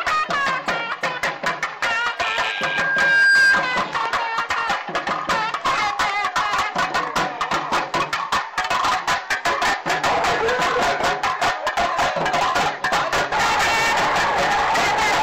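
At 2.13 s a single pure tone near 1.6 kHz appears and swells over about a second into a piercing squeal, reaching about 10 dB louder than the rest of the sound before it stops at 3.79 s. This is loudspeaker feedback squeal: the microphone was picking up the loudspeaker it was driving, and at 1.6 kHz the loop gain rose above one, so that frequency fed on itself until the loop was broken.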